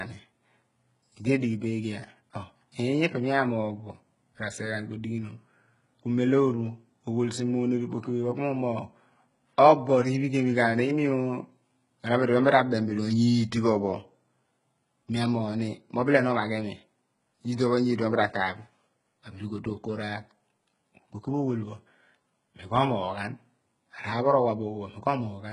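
Speech runs through its whole length with gritty, metallic s sounds and a treble that sounds synthetic and stops near 11 kHz. The likely cause is heavy HE-AAC compression at a very low bitrate, around 12 kbps: the upper band is rebuilt by copying lower harmonics upward, so it doesn't line up with the real sound.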